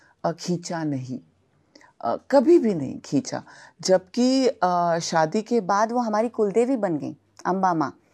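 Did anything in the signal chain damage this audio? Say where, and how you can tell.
Yes. Section at the wrong speed, 0.0 to 5.70 s: the speech runs at 0.893x, about two semitones low and slowed, likely from a playback or editing clock mismatch.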